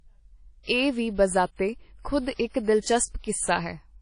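From start to finish the speech carries ringing, washy smearing and a hiss that swells and fades with the signal, likely WMA compression at a low bitrate near 32 kbps. A spectrogram shows a hard ceiling at 10.1 kHz and patchy gaps where weak components were zeroed.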